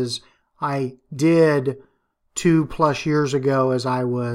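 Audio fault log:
No fault is heard anywhere in this speech clip.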